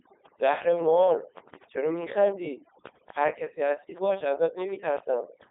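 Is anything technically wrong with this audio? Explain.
Yes, two faults run through the whole speech clip.

Throughout, the background falls to near silence dotted with twinkling specks. This is overdone noise removal: the reduction was set so strong that it shuts off frequency bands near its noise estimate, taking the quiet parts of the voice with them.

Also throughout, the voice is robotic and buzzy, heavily damaged, confined to roughly 300 Hz to 3.7 kHz with nothing above 3.8 kHz. This is the Codec 2 vocoder, which rebuilds speech from sine waves using only pitch, voicing, energy and envelope. The sound fits its 3.2 kbit/s mode.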